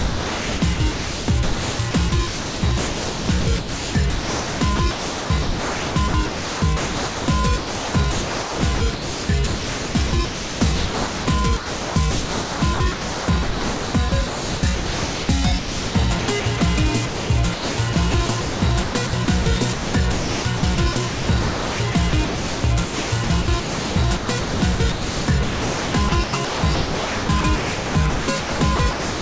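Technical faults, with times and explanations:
0.0–7.28, 7.58–11.27, 11.57–15.29, 15.59–16.61, 17.06–19.46 and 19.73–29.21 s: sound chopped by the voice detector. Quiet stretches and edges drop into a synthetic hiss, about 5.1 s of the first span and 5.7 s of the last. This is likely the sender's voice detector repeatedly gating transmission and substituting comfort noise, through a wideband call codec with nothing above 8 kHz.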